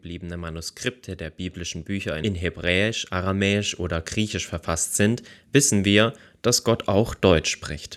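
The automatic gain control in this speech recording judged the input too quiet and began raising its gain at 1.56 s, climbing steadily until 7.53 s. This automatic gain rising lifts the voice and the background noise together by about 9 dB, a slow swell.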